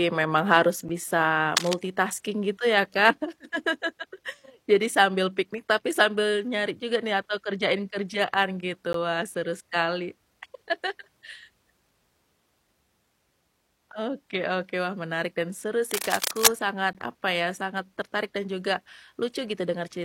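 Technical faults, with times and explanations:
0.89 s, 8.93 s, 16.93 s: gap between stream segments. Right after "memang harus", and again at the two later points, the speech drops out for about 9 ms, 14 ms and 18 ms. Each hole has hard edges on both sides. The timestamps of adjacent segments don't quite meet, and the player fills the shortfall with silence, so nothing is lost, only delayed. The spacing fits 4-second segments. On a waveform each one is a flat, near-silent notch. A spectrogram shows a thin, fully blank vertical stripe across every frequency, with sharp edges.
1.57–1.74 s and 15.91–16.47 s: cable scratch noise. After "memang harus bisa" and after "menarik dan seru", dense, irregular crackling and rustling rides over the speech, about as loud as the voice itself. It is likely a worn cable, connector or control being moved, which makes the contact resistance jump erratically. 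On a waveform it looks like jagged, spiky bursts layered onto the signal. A spectrogram shows ragged broadband speckle spread across the frequencies for the length of each burst.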